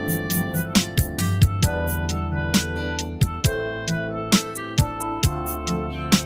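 From start to finish, the sound pumps and thins: attacks mostly come through, but anything sustained sinks a moment later, so held tones and decaying tails keep dipping by a few decibels and then recovering. That flutter comes from a noise suppressor applied to music or sounds. The processor was tuned for speech and treats steady tonal content, ambience and reverberation as unwanted noise, so it keeps turning them down.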